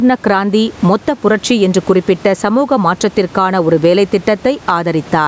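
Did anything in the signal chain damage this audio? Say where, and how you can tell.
Yes, gain pumping throughout. The gain swings by roughly 10 dB under loud speech, likely excessive input gain driving a fast limiter.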